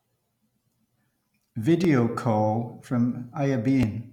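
At 1.85, 2.84 and 3.83 s, tiny skips of a few milliseconds recur about once a second with no silence, the likely sign of audio missing between chunks.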